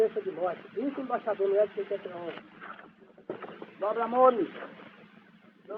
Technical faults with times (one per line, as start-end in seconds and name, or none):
2.38-3.47 call bitrate drop